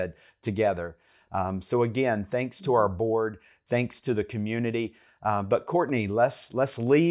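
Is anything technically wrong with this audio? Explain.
No, nothing technically wrong stood out on listening to this speech recording.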